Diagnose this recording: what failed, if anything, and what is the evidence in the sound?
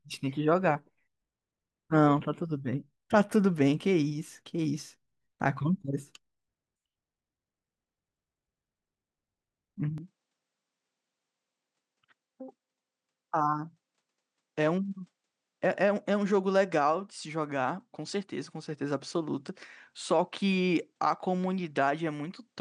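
At 9.98 s the speech abruptly turns duller, and it stays that way to the end. Nothing above 9.8 kHz remains after that point. The level drops by roughly 5 dB. A new, faint background noise appears, sitting roughly 55 dB below the speech. There is no gap at the change. This points to the driver or device stage. The likely cause is an input switched to a poorer device mid-recording, one with a narrower band, its own tone and its own noise floor.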